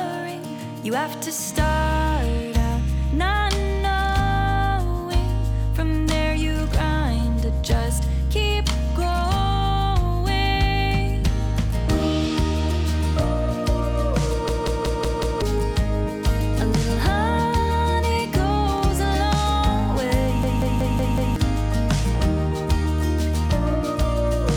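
At 14.49 to 15.42 s and again at 20.43 to 21.36 s there's a system hang loop. The machine froze while the hardware kept replaying one 186 ms chunk, five times at 5.38 Hz, which fits an 8192-sample buffer. You get a machine-gun stutter, and about a second of audio goes missing each time.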